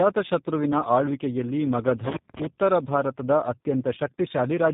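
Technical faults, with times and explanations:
Throughout: tandem speech coding. The speech sounds rough, dull and warbling, with nothing above 3.8 kHz, so sibilants lose their edge. The call passed from GSM full rate at 13 kbit/s through G.711 mu-law at 64 kbit/s to G.729A at 8 kbit/s, so two speech codecs sit in a row. G.729A re-coded what the GSM coder had already smeared, and each coder's errors stacked on the last.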